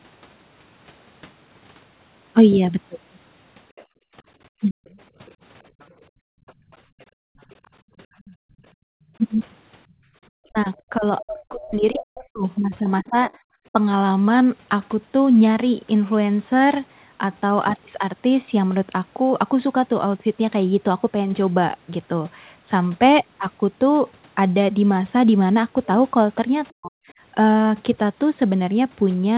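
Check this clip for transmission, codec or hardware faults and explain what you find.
Three echo-canceller faults show up in the speech, all clustered in the first 14 seconds with one late recurrence, heard through a narrow call band that stops at 4 kHz, consistent with G.711 mu-law at 64 kbps.

Other side's voice leaking through, 3.76 to 8.36 s and 9.9 to 13.36 s: a second voice sits faintly under the talker, well below the main speech. It is likely loudspeaker playback that the echo canceller failed to fully subtract from the microphone signal, so residual echo remains.

Background gated by the echo canceller, 3.86 to 4.15 s (about 34 dB down) and 6.1 to 10.14 s (about 40 dB down, around two seconds in total): while the loudspeaker played, the canceller clamped the microphone, so the room tone abruptly vanishes, then returns.

Speech suppressed in double talk, 4.61 to 4.82 s, 10.49 to 13.76 s and 26.75 to 26.94 s: the talker's voice drops very deeply in pieces, about a second and a half in the middle stretch. 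The likely cause is the canceller confusing overlapping talk with echo and attenuating both.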